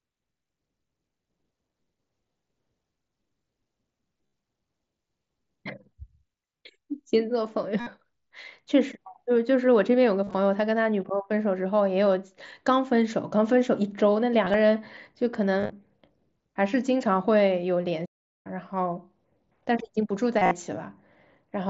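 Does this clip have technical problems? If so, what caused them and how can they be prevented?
Yes. Concealed Bluetooth headset packet loss occurs at 4.26, 7.80, 10.24, 14.45, 15.59 and 20.39 s. Each event spans 60 to 135 ms. Audio packets from headset to phone went missing. The receiver filled each gap by repeating recent waveform, giving brief buzzy, held tones. Keeping the phone close and away from busy 2.4 GHz equipment prevents this.

A playback stall runs from 18.05 to 18.47 s. The sound stops for about 0.4 s, then carries on. The player likely ran out of data or had its thread blocked. A larger playback buffer and fewer competing tasks would prevent it.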